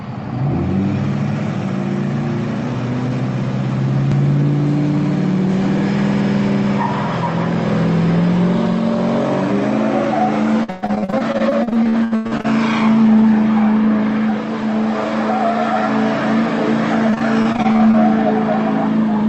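From 10.63 to 12.46 s, and again from 17.10 to 17.95 s, repeated packet loss gives a robotic sound. Packets kept going missing, and each hole was patched by stretching the preceding sound, leaving choppy, robotic audio. The first stretch is worse, with about 43% concealed and holes up to 121 ms. The second is milder, at about 25% with holes near 24 ms. The call codec limits the top end to about 8 kHz throughout.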